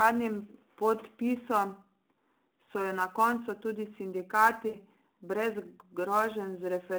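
A speech recording carried over a narrowband mobile link, with sample clock jitter running through the whole clip. The converter's timing wanders by something around 10 microseconds, so each sample lands slightly off its proper instant. The error tracks how steeply the waveform is changing, putting a rough hiss roughly 25 dB below the signal that swells on loud and bright sounds and drops away in pauses. On a spectrogram this appears as a faint broadband haze stuck to the louder speech and absent between phrases.

There are also lost AMR speech frames at 2.64 to 2.69 s, just before "so jo na koncu", and at 4.68 to 4.77 s. The decoder patched over the gaps, about 40 ms in the first case, which fits two frames, and 60 ms in the second, which points to three, by repeating its last good pitch and vocal tract settings with shrinking gain. Each is heard as a short smeared, warbling dip. In the waveform the envelope sags and turns oddly periodic there. 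The spectrogram shows the harmonics frozen and fading rather than moving with the speech.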